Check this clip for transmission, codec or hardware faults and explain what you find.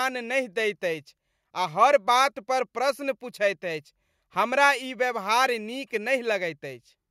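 No transmission, codec or hardware fault can be heard in the clip. Nothing in the audio points to a problem with how it was carried, encoded or recorded.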